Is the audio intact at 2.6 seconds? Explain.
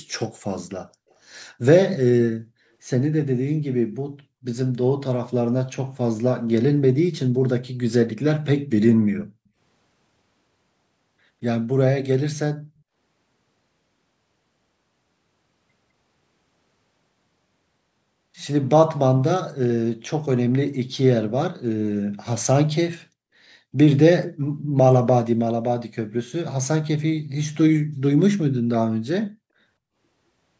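Yes, the speech at 2.6 seconds is intact, with no fault there, only the normal band limit of call microphone processing, which leaves nothing above about 8 kHz.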